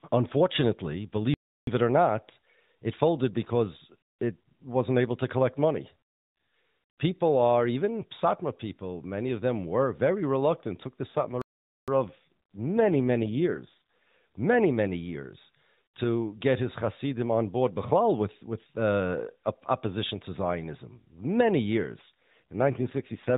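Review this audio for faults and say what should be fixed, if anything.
The sound cuts out completely at 1.34 s for about 0.33 s, resuming with "it or not it", and again at 11.42 s for about 0.46 s. These are playback stalls, likely from the player running out of buffered data or its thread being blocked, so output falls silent until it catches up. A deeper playback buffer and a decoding thread that is never blocked would prevent this.

From 11.07 s to 14.20 s, between "very reluctant took the" and "many many years to", and again from 22.01 s to the end, the voice turns rougher and buzzier, with no gap and no change in bandwidth. This is an AMR rate drop: the link pushed the AMR-NB codec down to a lower mode, consistent with a fall from 12.2 to about 5.9 kbps, putting bits into error protection instead of detail. Outside these stretches the narrowband codec shows only light damage. A stronger, more stable radio link would keep the codec at its higher rate.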